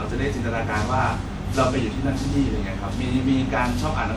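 From the first moment to the last, the speech carries a swirly, smeared, hollow character, with consonant attacks blurred and soft. That's the signature of generation loss: the audio has most likely been pushed through a lossy codec around seven times, each pass re-quantising on a shifted frame grid so noise and spectral holes pile up. The texture fits WMA at about 96 kbit/s, yet it sounds rougher than that rate alone would give.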